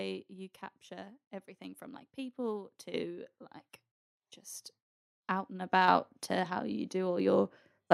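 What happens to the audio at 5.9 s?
At 5.88 s, just after "like just out and" and before "to how you", the microphone volume steps up. The call software judges the input too quiet and raises the device's capture gain in one jump of about 4 dB, so the voice and the background noise get louder together, mid-phrase. On a waveform the envelope widens abruptly at that instant and stays wider. On a spectrogram every band brightens at once, including the noise floor between syllables.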